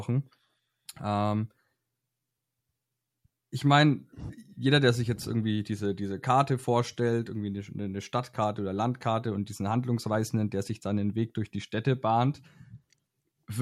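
No technical faults can be heard in this recording.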